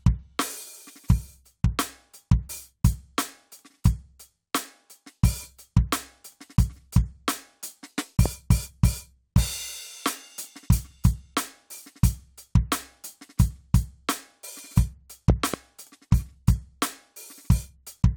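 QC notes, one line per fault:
8.26–8.28 s, loud pop: a single sharp pop about 10 dB above the music, which carries on underneath. It is likely a voltage step from a switch or static. The waveform shows a tall spike, and the spectrogram a thin full-band vertical line.
15.30–15.56 s, loud pop: two pops in quick succession, peaking about 15 dB over the music. They are likely from a plug or driver glitch. The waveform shows twin spikes, and the spectrogram two broadband vertical stripes.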